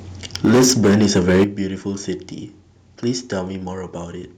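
From 0.44 s to 1.44 s the speech carries a harsh, crackling edge on its loudest syllables. This is microphone overload, likely from the input volume being set so high that peaks drove about 13 dB past the converter's ceiling, with around a fifth of the samples clipped. Squared-off waveform tops sound gritty and splattery. Codec artefacts sound watery or smeared instead, and the crackle here tracks each loud peak.

At 0.45 s, just as the distortion begins, the whole signal drops by about 3 dB in a single step. At 1.44 s, where the clipping ends, it drops again by about 10 dB. These are microphone volume step-downs, likely the call software reacting to the overload by cutting the device's input gain. The speech and the background fall together, instantly, with no ramp. That separates it from an automatic gain control easing the level down gradually or a fade.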